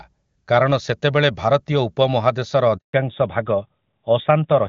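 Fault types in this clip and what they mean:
Handover gap: The call is passed from one network link to another, and for about 160 ms, from 2.77 to 2.93 s, no speech data gets through. The sound falls away within a few tens of milliseconds and leaves true silence until the new link picks up, so whatever was said in that moment is simply gone. On the waveform it shows as a flat line; on a spectrogram, a clean vertical blank stripe across all frequencies.
Fallback to narrowband: Right after the gap, from 2.93 s to the end, the call drops out of HD Voice onto an older narrowband codec, which fits a switch from high-rate AMR-WB to AMR-NB at around 12.2 kbit/s. Before the switch the wideband path carries energy up to about 7 kHz; afterwards nothing above 4 kHz remains, and the sound turns duller and more boxy. A spectrogram shows the upper band abruptly cut off with a hard ceiling at 4 kHz.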